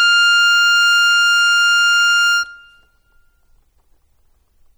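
Throughout the music, the top end sounds watery and swirly. Faint detail flickers in and out, and attacks smear. This is likely MP3 compression, starved of bits in a way that fits about 48 kbps, dropping weak frequency lines between frames.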